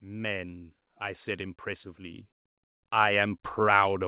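From 0.05 to 2.31 s, automatic gain rising: the gain control judged the input too quiet and raised its level by about 7 dB, so speech and background swell together. It climbs again from 2.97 s to the end, through the call's 4 kHz band limit.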